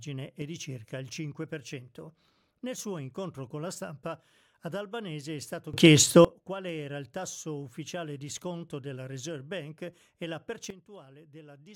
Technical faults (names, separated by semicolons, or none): sudden gain jump